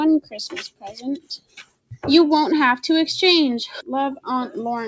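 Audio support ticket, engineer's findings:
Noise suppressor applied to music or sounds, whole clip: level pumps and thins, held material and tails pulled down while onsets pass. Probable component: speech-tuned suppressor treating sustained content as noise, gain swinging around 15 dB. Top ends near 8 kHz, consistent with the G.722 call path.

Sound cut by the noise suppressor, 0.69–1.03 s and 1.19–1.99 s: sustained sound sinks by up to about 21 dB, decays truncated. Same suppressor misclassifying steady, fading content as noise and attenuating it harder than the rest.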